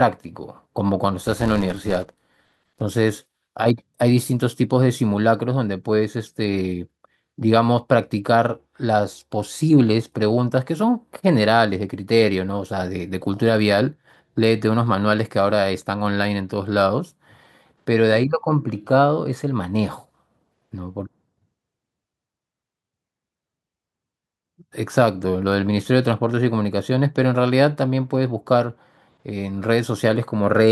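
From 1.26 to 2.82 s, the speech carries a buzz at 188 Hz. It is the sound of a filter restarted on every block. The filter drops its memory at each block boundary and starts again from silence. Each restart leaves a small click. The clicks repeat so fast they merge into a steady tone. That rate fits a 256-sample block. The buzz rises and falls with the loudness of the speech.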